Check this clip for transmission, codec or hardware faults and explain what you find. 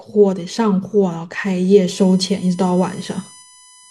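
There is one hardware fault: USB whine from 1.92 s to the end, a fixed 1 kHz tone with its strongest harmonic at 10 kHz, roughly 25 dB below the speech, from bus-frame current leaking into the audio path.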